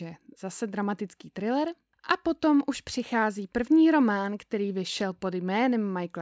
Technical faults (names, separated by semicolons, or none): none